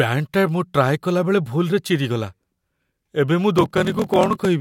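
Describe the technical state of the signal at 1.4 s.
At 1.4 s the signal is intact, with no dropout, clipping, distortion or other technical fault to be heard at that point.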